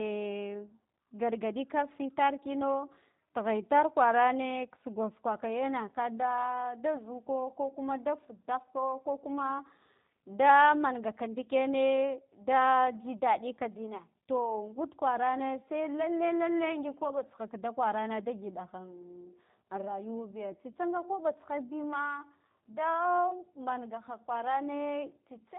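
G.729 codec damage runs through the whole speech recording: the sound is rebuilt from a vocal tract filter, a pitch predictor and a few pulses per short frame, which fits an 8 kbit/s VoIP stream. Nothing passes above 3.8 kHz, so the speech sounds muffled, and it is also rough and plainly synthetic.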